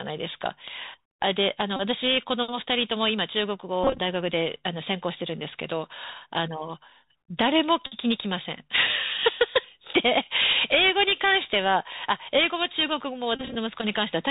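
Bluetooth CVSD headset codec damage runs through the whole speech clip, plainly audible from start to finish. The codec sends one bit per sample at 64 kHz, each bit nudging the signal up or down by an adaptive step, so the band stops at 4 kHz. Sibilants come out scratchy, loud bright moments distort where the step cannot keep pace, and a grainy hiss sits beneath everything.

Bluetooth headset packet repeated faults occur at 1.76–1.81 s, 3.84–3.99 s, 7.86–7.97 s and 13.35–13.56 s. When packets drop, the headset decodes the previous packet's bits again, and repeating every 3.75 ms gives a buzz near 267 Hz. The first gap covers about 30 ms, the third about 52.5 ms. The second and fourth are scattered bursts, about 97.5 ms lost over 150 ms and 123.8 ms over 202.5 ms, with runs of around 20 ms at most, so the buzz stutters rather than holds.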